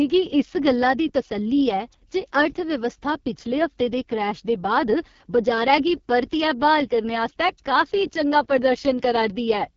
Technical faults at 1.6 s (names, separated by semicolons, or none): AMR wideband (HD Voice) codec